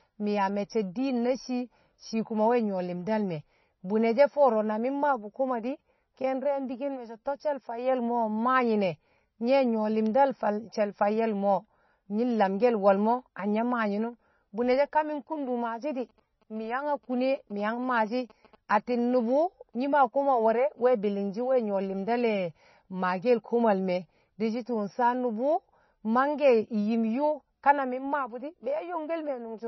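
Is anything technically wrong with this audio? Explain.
Yes. MP3 compression runs throughout: nothing above 5.9 kHz survives, and the speech sounds heavily watery, likely from a bit-starved encoder (around 24 kbps) zeroing weak frequency lines frame to frame.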